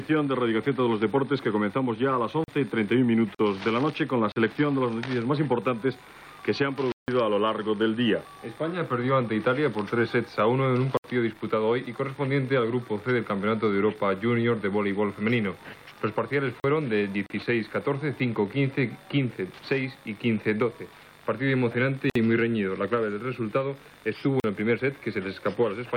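At 2.44 s a block of digital silence appears: a run of samples was zeroed instead of carrying the audio, so the sound drops to nothing and returns without any fade. The hole lasts 40 ms. The same fault recurs at 4.32, 6.92, 10.97, 16.6 and 24.4 s. Most of these holes last 40 ms, but the one at 6.92 s is 160 ms and the one at 10.97 s is about 68 ms, so they are heard as a short dropout rather than a tick.

At 3.35 s there is a gap at a join of encoded pieces. The audio was encoded in separate segments and spliced together without removing the encoder's start-up delay and end padding, so that leftover silence sits between the pieces. Continuous sound stops for about 46 ms, with edges smeared by the codec, then resumes exactly where it left off. Similar join gaps occur at 17.26 s (about 37 ms) and 22.10 s (55 ms).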